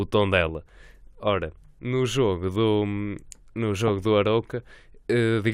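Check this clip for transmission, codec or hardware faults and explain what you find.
One fault is audible in this speech clip: DAB burbling at 3.88 s. A brief burst of noise blips sits over the speech as residual bit errors, around a tenth of a percent, slip past error correction and corrupt MP2 samples, putting short blips of noise in single sub-bands.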